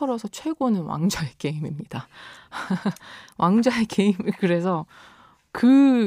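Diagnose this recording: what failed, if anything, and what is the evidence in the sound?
Nothing in the recording points to a failure at any stage of the chain. The speech comes through with no audible fault to trace.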